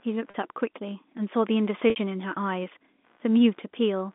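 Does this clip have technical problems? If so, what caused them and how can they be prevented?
Yes. Computer activity noise runs through the whole clip: a faint buzzing at around 70 pulses a second, roughly 40 dB below the speech. It comes from the processor, graphics card or mouse drawing changing current, which shifts the ground that the audio circuit shares with the computer. It rises and falls with that load, not with the speech. The telephone band of about 200 Hz to 3.6 kHz carries it along with the speech. Preventing it means breaking the shared ground with a USB isolator, a ground-loop isolator or an external audio interface that has its own clean supply.

Packet loss with pitch repetition occurs twice, from 0.30 to 0.34 s and from 1.90 to 1.96 s. The first gap is 40 ms, which fits two lost 20 ms packets. The second is 60 ms, which fits three. The receiver filled each gap by repeating the last pitch period, so the speech briefly holds on a buzzy, slightly frozen tone. 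The longer 60 ms gap starts to fade before the speech cross-fades back in. Preventing it means giving the call a stable network path, using a wired connection, prioritising voice traffic, and adding a larger jitter buffer or forward error correction.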